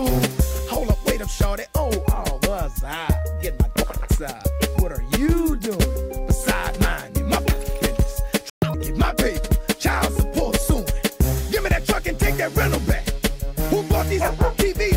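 The audio goes silent from 8.50 to 8.62 s, a 120 ms playback stall that resumes where it stopped rather than skipping, likely from the player running short of data. From 8.62 to 8.74 s comes catch-up at higher speed: the audio plays at 2.0 times normal, so tempo and pitch rise together by roughly ten semitones, unlike a pure pitch shift, before settling back.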